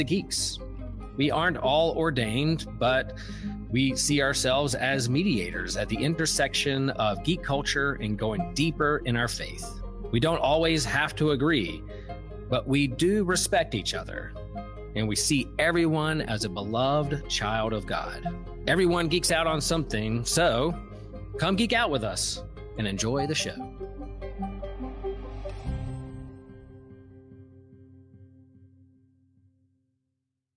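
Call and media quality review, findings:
No audible faults found.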